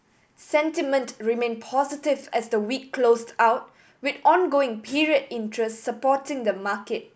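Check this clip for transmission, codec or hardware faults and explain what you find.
Nothing stood out on listening to this speech recording that would point to a transmission, codec or hardware problem.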